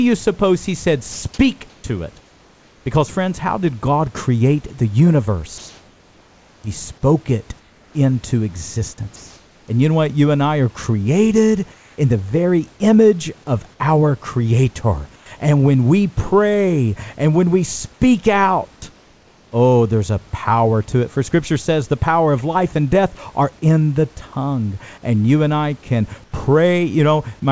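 This speech clip is carried over a call link whose band stops at 8 kHz, which fits a G.722 wideband codec. Right after "suppose he said", at 1.12 s, about 100 ms of sound drops out and gives way to a flat, steady hiss before the talker returns. This is sound dropped by the voice detector: the sender most likely judged the quiet tail of the phrase to be background and stopped transmitting, so the receiver played synthetic noise over it until the detector triggered again.

The pauses show the related fault, comfort noise in place of the background. The room noise, sitting roughly 30 to 35 dB below the loudest speech, turns featureless and usually drops by about 2 to 5 dB. This happens at 1.12–2.86 s, 5.58–6.64 s (no level change there), 7.60–7.94 s, 11.74–11.98 s between "and I are created" and "the very image of", 15.16–15.26 s, 18.92–19.52 s, and 26.24–26.32 s after "you and I can". The likely cause is discontinuous transmission, where the receiver fills each silent stretch with generated noise roughly matched to the background.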